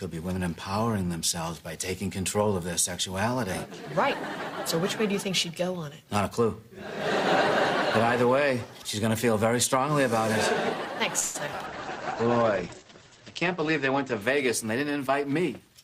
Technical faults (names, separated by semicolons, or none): call audio freeze; skip ahead; call bitrate drop; jitter buffer slow-down; jitter buffer speed-up